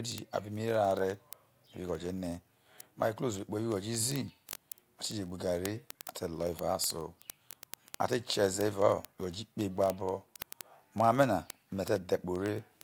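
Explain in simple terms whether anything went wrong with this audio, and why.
Two linked digital devices ran on slightly mismatched clocks, causing word clock ticks: sharp clicks about fifty times a second from 0.12 s to the end.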